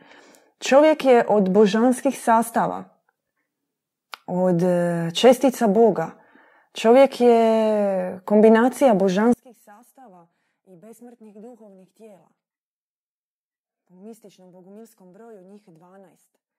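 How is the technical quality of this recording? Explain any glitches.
The quality breaks down partway through. From 9.34 s to the end at 16.58 s, the speech drops by about 29 dB to a faint remnant. The likely cause is one channel inverted: opposite-polarity channels cancel their shared centred content when summed to mono. The waveform collapses to a sliver, and the spectrogram fades across the whole band.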